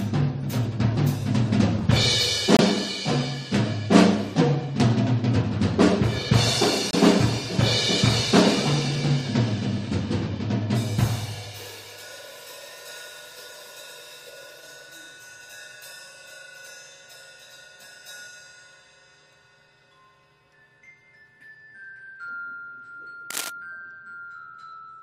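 At 2.57 s the sound drops into a sudden 32 ms hole of silence, and at 6.91 s a 40 ms gap cuts in the same abrupt way. These are corrupt frames muted: damaged compressed data was rejected by the decoder, and silence was substituted while the timing was preserved.

From 23.30 to 23.50 s a dense, uneven scratching rustle sits over the sound, roughly 5 dB below the signal. This cable scratch noise is likely a worn cable, connector or control being moved, its contact resistance flickering rapidly.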